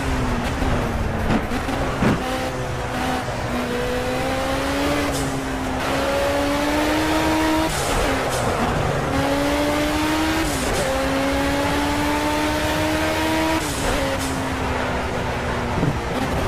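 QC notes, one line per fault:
No faults to log on this pass, so nothing here needs flagging for repair.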